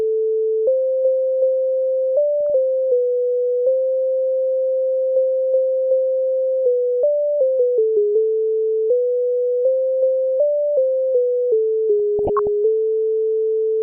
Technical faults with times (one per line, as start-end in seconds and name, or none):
2.50 DAB burbling
7.51-7.59 DAB burbling
12.19-12.47 DAB burbling